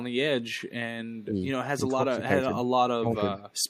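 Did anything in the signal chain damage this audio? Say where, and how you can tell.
Yes, in call processing. Faint echo leak sits at 0.54–0.67 s, 1.15–1.25 s and 3.37–3.43 s, a delayed copy at about 30 to 40 dB below the speech, likely from a loudspeaker echo canceller letting residue through. The fixed 413 ms lag separates it from diffuse room reverberation.

Speech suppressed in double talk also shows up in call processing, at 1.26–1.39 s, 1.88–2.54 s and 2.97–3.37 s, where the voice dips by about 10 to 15 dB. The likely cause is an echo canceller ducking both its own talker and the loudspeaker echo during overlap.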